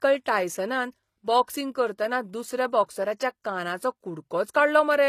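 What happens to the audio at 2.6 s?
At 2.6 s, as throughout, the speech has plainly audible damage, likely HE-AAC compression near 24 kbps. Its treble is copied up from lower bands, sounding gritty, and stops at 14.9 kHz.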